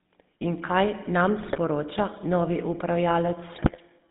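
Throughout, the speech passes through a GSM full-rate codec. Its pulse-driven vocal model gives a buzzy, gravelly roughness, with the band held to 150 Hz to 3.6 kHz, fitting a 13 kbps coder.

From 1.40 to 1.57 s, just after "kaj nam", GSM bit errors corrupt the decoder's parameters. The sound squawks and gargles. Again at 3.54 to 3.76 s, it pops and garbles.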